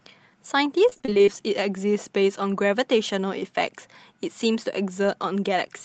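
The clip is speech carried over a call link. Its top end stops near 8 kHz, which fits Opus at a modest bitrate. From 0.89 to 1.29 s there is repeated packet loss, heard as robotic sound. The audio turns choppy. Ten short holes fall in that stretch, the longest about 26 ms. Each one is filled by stretching the previous sound, so about half of that stretch is patched-in audio rather than real signal.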